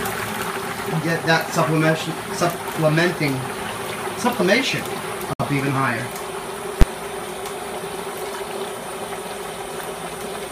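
At 5.33 s the sound drops out for about 62 ms, with smeared edges, then resumes where it stopped. This is a gap at a join of encoded pieces: separately encoded sections, apparently 6.0 s long, were joined without trimming their start-up delay and end padding.

At 6.81 s there is a single loud bang lasting about 11 ms. These are invalid numbers at full scale: a calculation produced infinite or invalid values that were forced to maximum amplitude for one block, which fits a 512-sample block.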